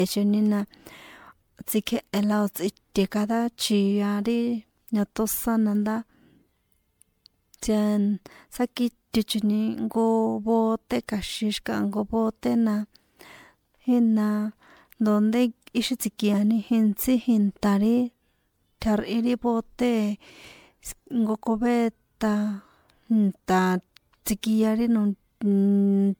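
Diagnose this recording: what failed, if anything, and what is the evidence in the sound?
Generation loss runs through the whole speech recording, a codec-stage fault. The sound is swirly, hollow and smeared, with blurred attacks and no content above 20 kHz, which fits MP3 at 128 kbit/s likely re-encoded around ten times, each pass adding quantisation noise and spectral gaps.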